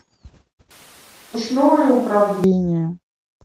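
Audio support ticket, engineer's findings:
0.71–2.44 s: voice suddenly roomy and hollow, thinner low end, level down about 5 dB, room noise only about 30 dB below speech. Likely switch to a distant microphone; close mic signal lost, farther pickup carrying the audio until 2.44 s.

1.33–1.35 s: abrupt forward jump, no gap, roughly 0.7 s of audio absent, two sides butted together. Skip ahead, probably jitter buffer overflow discarding a queued stretch, cutting latency by about the same 0.7 s.

3.06–3.44 s: speech hurried, pitch unchanged, running at 127% speed. Jitter buffer speed-up: receiver trimming repeated pitch-period-sized slices to drain excess buffered audio, removing about a tenth of a second in total.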